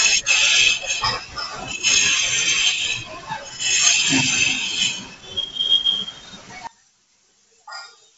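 One channel was likely inverted from 6.67 s, so the mono sum cancels and the speech falls by about 24 dB to a faint residue.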